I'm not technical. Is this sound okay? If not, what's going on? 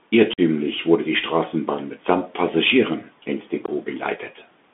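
No, it isn't quite right. The speech sounds thin and telephone-like throughout because it went through a Bluetooth CVSD headset codec. That old headset format keeps only a narrow middle band, roughly 200 Hz to 3.5 kHz, so there's no crispness. S sounds come out scratchy, and a grainy hiss sits underneath.

There are also two tiny dropouts from unconcealed Bluetooth headset packet loss. Scraps of audio between headset and phone went missing and nothing filled the gaps. One hole, about 45 ms long, falls around 0.33 to 0.40 s. A shorter one, about 19 ms, comes at 3.66 to 3.69 s. Each cuts in and out abruptly.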